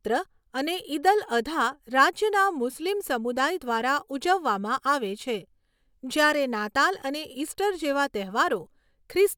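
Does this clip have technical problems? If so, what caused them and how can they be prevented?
No, there are no technical problems to report here.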